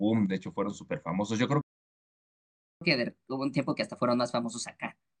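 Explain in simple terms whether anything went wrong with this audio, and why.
At 1.61 seconds the speech suddenly stops. Silence follows for about 1.2 seconds, until 2.81 seconds. This is a playback stall. The player most likely ran short of audio data, or it was held up by something else on the device. Nothing reached the speakers until it recovered. The talking then picks up again.

From 2.81 seconds to the end, the speech runs fast. This is catch-up at higher speed. The player is clearing the backlog left by the stall. It plays about 1.15 times faster than normal to win back some of the lost time. Because it simply speeds up the sound, the pitch rises too, by roughly two semitones. Voices sound hurried and higher for this stretch.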